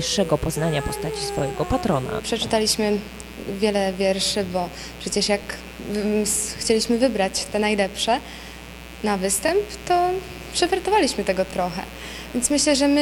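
A mains buzz runs throughout: 60 Hz switching spikes add a raspy drone about 15 dB below the signal, seen as evenly spaced horizontal harmonic lines on a spectrogram.

At 7.46, 9.48 and 11.51 s, overlapping chunks replay about 23 ms at each 2-second join, causing a click or stutter; the waveform shows a short stretch repeated.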